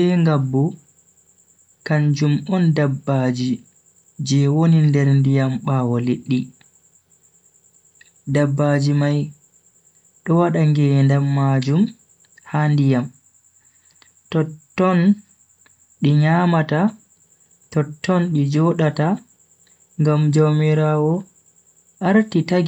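Speech recording with no audible technical faults.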